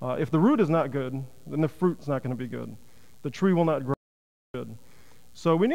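At 3.94 s a playback stall drops the sound into silence until 4.54 s, about 0.6 s; the player likely ran out of data or stalled on a blocked thread.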